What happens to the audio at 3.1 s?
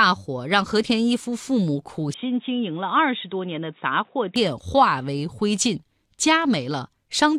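At 3.1 s the speech is dull and boxy, with nothing above 3.8 kHz. It drops a little in level and gains faint new background noise. This runs from 2.14 to 4.36 s, with no gap at either edge. The input was likely switched to a poorer device.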